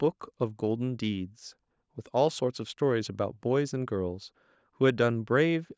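No technical faults can be heard in this speech, which has gone through a call's microphone processing that trims the lowest bass and carries nothing above 8 kHz.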